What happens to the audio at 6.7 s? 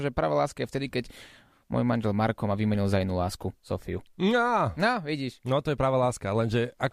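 Nothing goes wrong at 6.7 s; the speech carries on intact through that moment.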